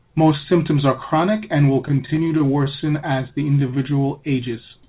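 Between 1.88 and 2.69 s the speech catches and drags in eight brief stalls, none longer than 17 ms, with about 97 ms of continued sound bridging them and nothing lost. These are repeated stalls (stutter): packets arrived late, so the jitter buffer kept running dry and the receiver extended the last sound until data resumed. From 3.59 to 4.03 s the speech stretches out at unchanged pitch, playing at 88% speed and gaining 59 ms. This is a jitter buffer slow-down, in which the receiver repeated single pitch periods to rebuild its reserve. The audio has nothing above 4 kHz, which fits narrowband call coding such as G.711.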